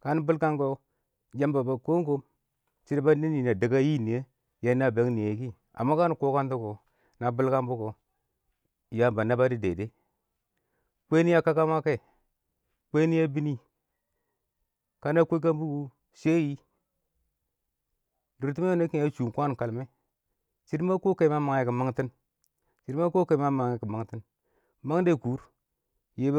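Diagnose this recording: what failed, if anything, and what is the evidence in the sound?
Nothing in this speech recording points to a failure at any stage of the chain. The sound gives no evidence of trouble from capture through to playback, so there is nothing to diagnose.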